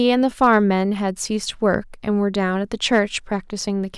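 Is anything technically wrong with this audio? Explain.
Yes. The speech has hard clipping in three places. From 0.08 to 0.57 s the level runs about 2 dB past what the signal path can carry. The loudest peaks are sliced flat. A brief overload near 1.74 s is about 1 dB over. A third, about 2 dB over, spans 2.93 to 2.99 s. Flattened peaks generate harmonics high in the spectrum. With overloads this small, the result is a short crackle on the peaks, not a sustained fuzz.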